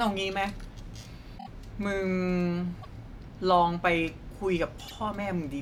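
Repeated frames occur three times in this speech. At 1.37 to 1.48 s, a 26.1 ms block plays four times in a row, a length that fits a single compressed frame. This produces a stutter and adds 78 ms. At 2.81 to 2.87 s, the same-length block plays twice, a short hiccup adding 26 ms. At 4.87 to 4.93 s, a 52.2 ms block, consistent with two frames, repeats once. In each case the decoder replays data it already played.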